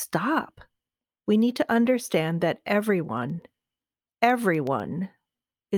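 Periodic USB or driver dropouts run from 3.05 to 4.80 s in this speech clip, right after "need to understand that". Every 0.125 s a tiny slice of audio, well under a millisecond, drops to silence as the bus or driver stalls, giving a steady ticking about fifteen times over the speech.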